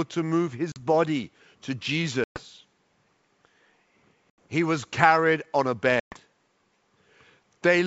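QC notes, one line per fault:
0.72 to 6.16 s, packet loss on an ADPCM call: four hard-edged silent holes at 0.72, 2.24, 4.30 and 6.00 s, after "to move", "body to" and "was carried on a", each followed by slightly distorted speech before settling. Lost packets (about 40 to 120 ms of audio) were replaced by silence, knocking the decoder's adaptive predictor and step size out of step with the sender's until they re-converged. The G.722 wideband coding otherwise stays clear.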